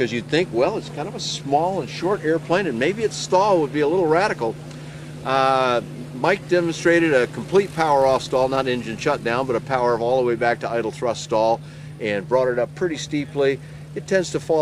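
No faults are audible anywhere in this recording.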